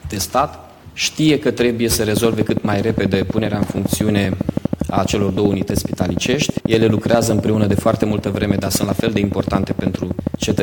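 A train of clicks runs from 2.17 s to 10.6 s. Around a hundred regular pulses tick at 12.5 per second, well above the sound, likely from nearby equipment interference.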